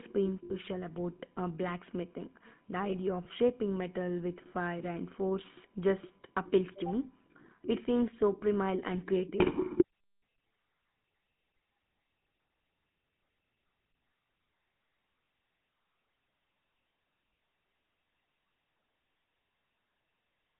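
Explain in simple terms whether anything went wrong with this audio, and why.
The whole recording has gone through the GSM full-rate codec, the old mobile-phone speech coder. It rebuilds the voice from a simple model driven by regular pulses, so the speech sounds buzzy and gravelly, and the sound is confined to a narrow phone-line band of about 150 Hz to 3.4 kHz.

There are also three short dropouts from lost GSM frames, at 0.44–0.51 s just before "about uh blacksmithing", 3.24–3.27 s just before "shaping metal with fire", and 15.24–15.28 s. In each gap the decoder repeats the last good sound, so you hear a brief rough, metallic ring.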